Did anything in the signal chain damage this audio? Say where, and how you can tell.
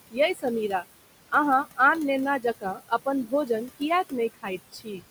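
Yes. The damage sits in the call processing stage, where a noise suppressor runs across the whole clip. The room noise, about 13 dB under the speech, is pulled down by about 19 dB in the gaps and comes back under each phrase. That pumping is the noise suppressor artifacts. The suppressor decides frame by frame which bands hold steady noise and lowers them.

The same stage also causes speech cut by the noise suppressor, in four places: 2.41 to 3.07 s, 3.26 to 3.5 s, 4.34 to 4.48 s and 4.72 to 5.02 s. The drops reach about 20 dB in the first and third spans, about 10 dB in the second and about 14 dB in the last. Only part of each span is hit. Soft speech there was mistaken for noise and turned down with it. Those moments sound swallowed and faint.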